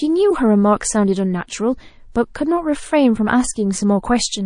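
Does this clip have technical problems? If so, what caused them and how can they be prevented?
Yes. All the way through, this speech has a watery, swirly quality, with the s sounds turning chirpy and metallic. That's likely MP3 compression at a bitrate around 40 kbps, where the encoder runs short of bits and lets weak frequency lines flicker on and off between frames. To avoid it, encode at a higher bitrate or keep an uncompressed copy for any further work.

There's also a pre-echo from 2.12 to 2.15 s: a hiss, rising about 13 dB, creeps in roughly 32 ms ahead of a sharp attack and softens it. The codec smeared its quantisation noise across a long transform block, which fits a window of about 52 ms with no switch to short blocks, so the quiet gap before the attack got filled. An encoder that switches to short blocks on transients, or simply a higher bitrate, would prevent this.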